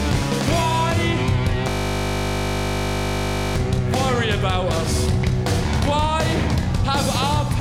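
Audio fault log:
1.70–3.56 s, system hang loop: the system froze while the audio hardware kept replaying a single 20 ms slice of its buffer, so for nearly two seconds you get a steady 50 Hz buzz instead of moving sound. The short loop points to a small ring buffer.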